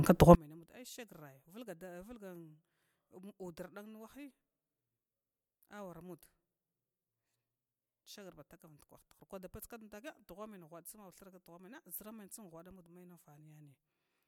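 Speech whose level collapses by about 32 dB from 0.35 s to the end. One channel inverted is the likely cause, so summing cancels the shared centre.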